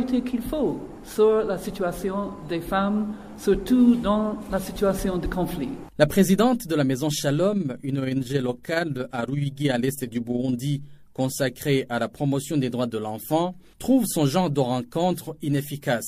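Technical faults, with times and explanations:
7.52–10.6 s, overlap-add ripple: the level pulses up and down by about 6 dB around 20 times a second, giving a fast, rough flutter like a tremolo. The audio here was split into overlapping windowed frames and summed back together, but the window shapes and overlap did not add up to a constant gain. Each frame therefore leaves a bump and a dip, and the flutter rate follows the frame rate.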